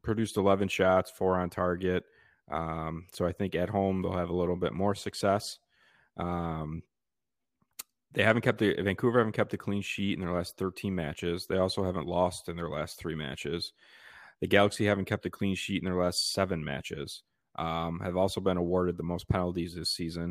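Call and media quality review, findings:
No audible faults found on the speech path; nothing to escalate.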